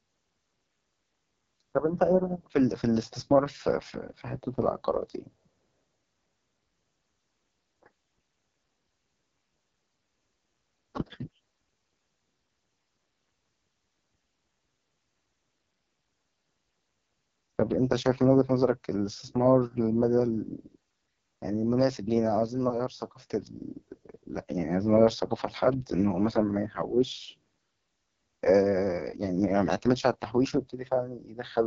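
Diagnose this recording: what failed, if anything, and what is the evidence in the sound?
AMR wideband (HD Voice) codec, throughout, at the codec stage. The speech sounds rough and raspy, with nothing above 7.5 kHz and a top band of shaped noise instead of detail. Damage this heavy fits the 6.6 kbit/s mode, where the pulse-driven vocal tract model is starved.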